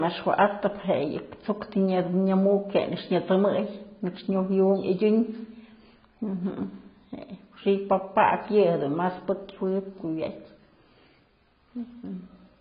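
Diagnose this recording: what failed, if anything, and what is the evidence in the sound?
AAC compression throughout the speech, at the codec stage: nothing remains above 5 kHz, and the sound is dull, smeared and warbling on sibilants. The likely cause is AAC-LC at a very low bitrate, around 16 kbps, dropping upper bands and coarsely quantising the rest.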